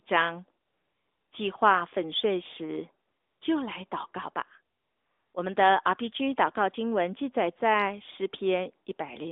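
A speech clip carried over an AMR narrowband mobile link, band-limited to roughly 250 Hz to 3.6 kHz. It has two stretches of AMR comfort noise, 0.66 to 1.32 s and 4.76 to 5.34 s. In each, the real background is replaced by smooth synthetic hiss, seen as flat, featureless spectrogram bands and an even, low waveform floor switching abruptly in and out.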